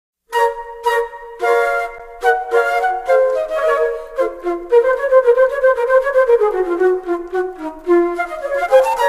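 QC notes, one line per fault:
1.98 s underrun with held sample: the output held its last value for 11 ms, which fits a 512-sample buffer, then resumed where it stopped with only a soft edge.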